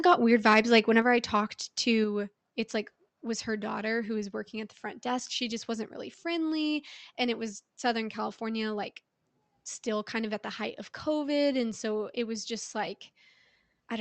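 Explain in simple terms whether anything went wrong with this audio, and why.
Yes, two things went wrong. The first is likely microphone overload: the input was set too high, so right at the start, from about 0.08 to 0.13 seconds, the loudest moments pushed past the most the microphone's converter could handle. Their tops were sliced flat, which gives that instant a brief harsh, crackly edge. Only a small share of the sound was cut this way, just slightly over the limit, so the effect is short.

The second is a microphone volume stepped down, twice. The call software most likely judged the input too loud after that rough start and turned the microphone down in one quick move, at about 1.02 seconds, just before "I talked", and again at about 2.04 seconds, between "I talked" and "it's like was her". Each time the voice and the background drop abruptly in loudness together, so the sound gets quieter in two distinct steps. 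The call connection carrying the audio, which cuts off the highest tones, is not at fault.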